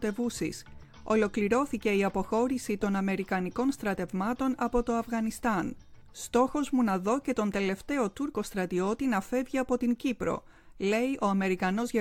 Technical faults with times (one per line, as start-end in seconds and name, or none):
0.16-11.98 clock slip clicks